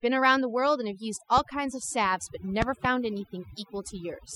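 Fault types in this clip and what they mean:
Overdone noise removal: Noise reduction was applied far too hard across the whole clip. Frequency bands near the noise level are pushed almost to nothing. The pauses fall to near silence with faint twinkling specks. Quiet parts of the speech vanish too.
Loud pop: Two sharp pops land between 2.62 and 2.87 s, far louder than the speech, roughly 15 dB above it. The speech carries on underneath them. The likely cause is a sudden voltage step or pulse, as from a plug, switch or static discharge.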